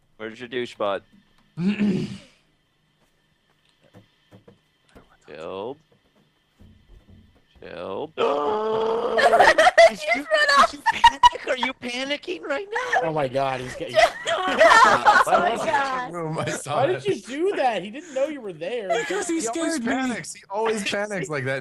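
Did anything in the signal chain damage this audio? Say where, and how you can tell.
Yes. The damage happens at the network stage, where an adaptive stream dropped to a lower bitrate. From 8.33 s to 16.33 s the treble collapses. Nothing above about 12.1 kHz survives, and codec artefacts thicken. The switch is abrupt in both directions, with no gap or dropout. That points to the player swapping from a rendition near 64 kbit/s to one near 16 kbit/s while the connection slowed, then stepping back up.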